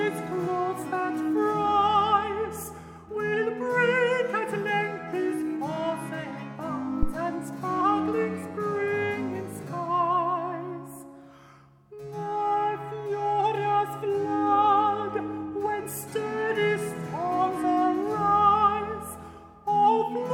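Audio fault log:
7.03–7.14 s, phantom power thump: a supply voltage switched on or off on a live input, and that sudden DC step charged through the coupling capacitors into the signal path. It arrives as a single deep thump peaking at about -11 dBFS, dying away within roughly 26 ms.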